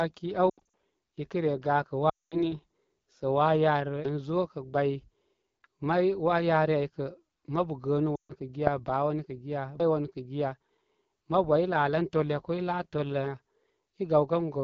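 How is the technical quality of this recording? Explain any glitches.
The recording quality is poor, with coding damage throughout and several audible dropouts.

AMR wideband (HD Voice) codec, throughout: the speech carries a rough, raspy texture, with the top band filled by shaped noise rather than real detail. This degradation fits AMR-WB running at one of its lowest rates, around 8.85 kbit/s, where the vocal tract model is starved of bits.

Lost AMR speech frames, at 0.50 to 0.61 s, 2.09 to 2.52 s and 8.15 to 8.33 s: failed frames force the decoder to repeat the last good pitch and vocal tract settings at falling gain. The first event is a scattered warble, with gaps of up to 80 ms spread over roughly a quarter second. The other two are longer runs, about 220 ms and 140 ms, that drop quickly to near silence before the speech returns weak.

Audio missing between chunks, at 4.05 s and 9.80 s: each point is an abrupt skip where roughly a third of a second vanishes and the two sides butt together without silence. 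The two skips fall about six seconds apart, which likely points to audio being lost while one processing chunk closes and the next opens.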